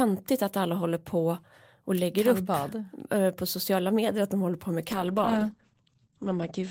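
At 4.88 s there's a call bitrate drop that lasts right to the end: the encoder gets squeezed from about 40 kbps down to 12 kbps, so the speech turns coarse and watery, and the top end gets chopped from 20 kHz to 8 kHz, leaving it muffled.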